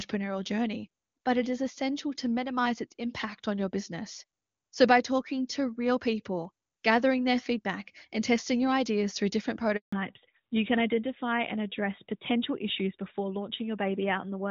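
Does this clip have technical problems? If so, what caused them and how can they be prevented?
Yes. A handover gap runs from 9.76 to 9.93 s, right after "your ideas through different". While the call switched networks no speech frames arrived, so the sound cuts out for about 160 ms and whatever was said then is lost. Keeping the phone on one network, with a stable signal, during the call prevents it.

Fallback to narrowband follows at 9.93 s and lasts to the end. The call dropped from the HD Voice codec to a narrowband one, so everything above 4 kHz disappears and the sound turns duller and rougher. The wide band before the switch points to AMR-WB at its top rate, and the narrow band after it to AMR-NB at 12.2 kbit/s. Ensuring both networks and handsets support HD Voice end to end prevents the fallback.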